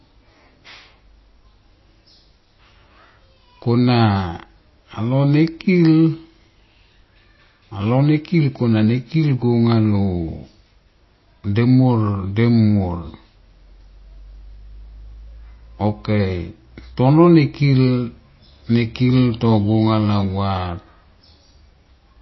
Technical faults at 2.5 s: MP3 compression

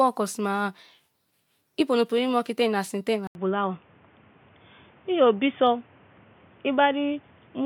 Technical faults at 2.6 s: none

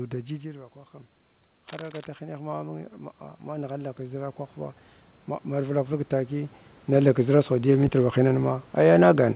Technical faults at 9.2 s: none

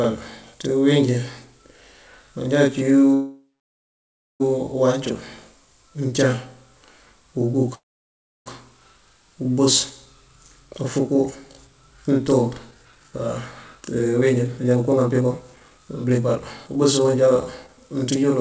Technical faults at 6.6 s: channel delay (doubling)

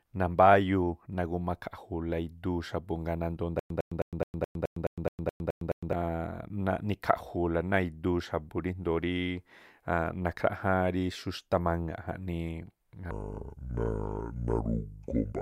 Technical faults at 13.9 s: section at the wrong speed

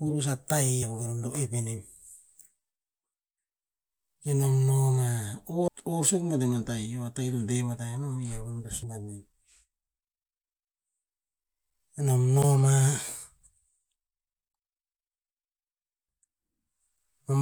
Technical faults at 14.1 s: none

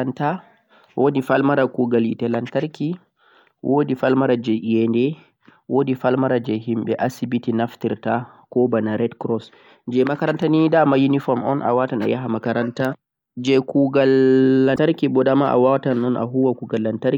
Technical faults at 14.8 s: damaged data in a compressed stream

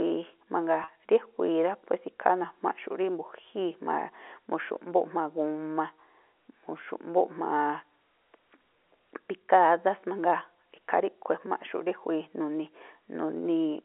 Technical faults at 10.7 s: none

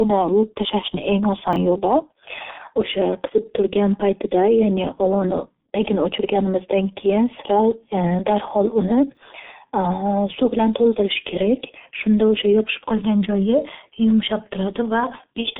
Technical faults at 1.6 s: G.723.1 codec; chunks out of order

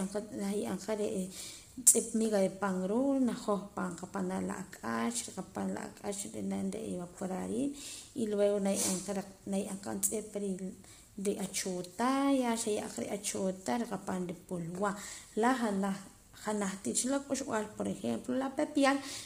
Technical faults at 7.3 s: low-delay AAC compression

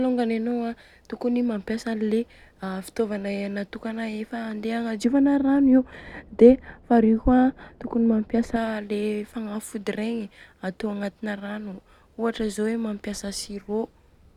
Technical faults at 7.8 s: de-emphasis applied wrongly

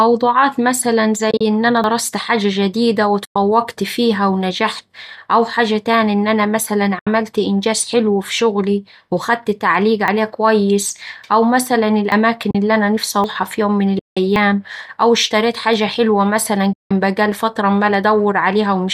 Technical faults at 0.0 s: none

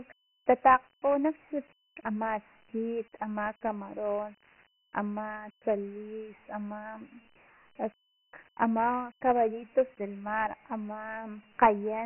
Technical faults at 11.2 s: Dialogic VOX ADPCM

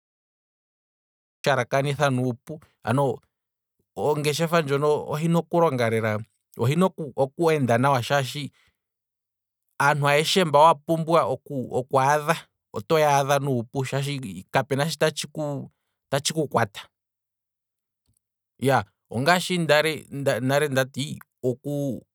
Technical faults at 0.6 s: cut-off start

